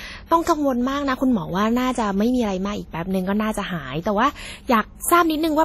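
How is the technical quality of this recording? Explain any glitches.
The technical quality is poor: heavy lossy-codec damage runs through the whole speech clip. Across the full duration, the sound rings and smears, with a hiss that swells and recedes along with the speech and nothing above 15.7 kHz. This is likely WMA compression at a low bitrate; the damage fits something around 32 kbps. Its long transform blocks spread quantisation noise over tens of milliseconds, and weak spectral lines are zeroed. A plain low-pass filter would only dull the top end, whereas here the noise itself breathes with the signal.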